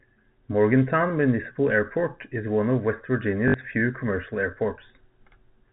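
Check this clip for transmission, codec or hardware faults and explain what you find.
One transmission fault stands out: packet loss with the last packet repeated, from 3.48 to 3.54 s. About 60 ms of audio went missing, which fits three lost 20 ms packets. The receiver filled the gap by replaying the last good packet until fresh ones arrived. Such repeats seldom line up with the pitch of the speech. The result is a brief robotic stutter with a buzz near 50 Hz. The G.711 telephone band can be heard throughout, capped at 4 kHz.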